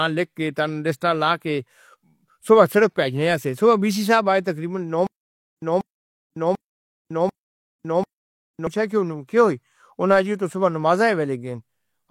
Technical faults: stutter with silent gaps

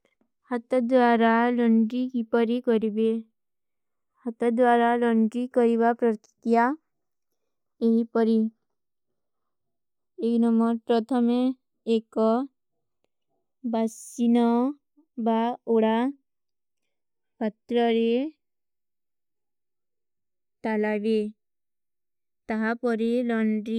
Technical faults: channels drifting apart

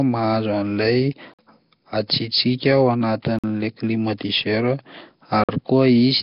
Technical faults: Nellymoser compression; gap between chunks

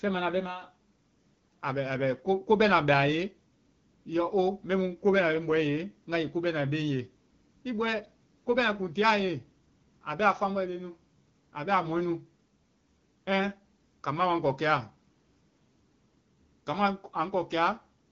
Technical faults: none

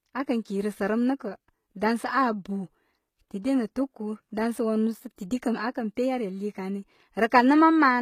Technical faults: HE-AAC compression

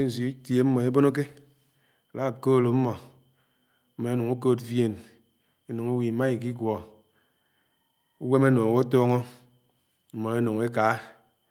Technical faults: none

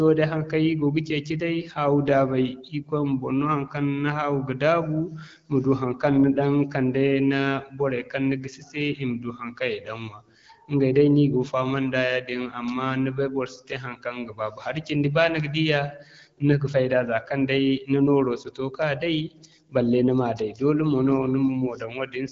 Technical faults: none

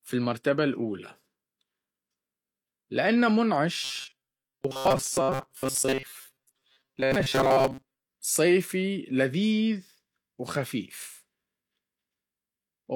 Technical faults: robotic sound from repeated short buffers

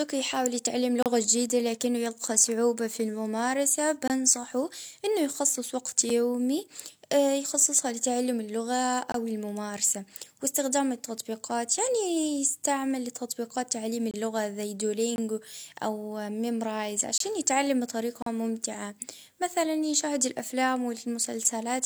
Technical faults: gap between stream segments

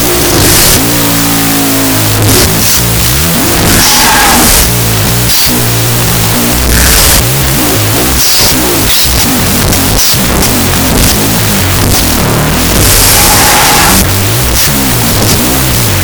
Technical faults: wrong sample width

